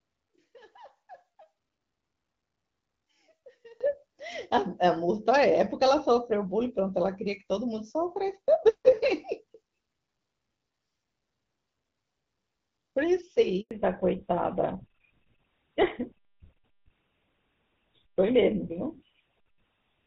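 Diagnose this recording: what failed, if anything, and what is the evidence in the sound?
Analogue wiring: from 0 to 3.81 s the speech sits about 29 dB low, with its centred content largely cancelled. The likely cause is one channel inverted, collapsing under a mono sum.

Network: a handover gap of 100 ms of silence at 13.61 to 13.71 s. The speech cuts out because no frames arrived while the call switched links.

Codec: a fallback to narrowband from 13.71 s to the end. Nothing remains above 4 kHz, and the speech turns duller, which fits a drop from AMR-WB to GSM full rate.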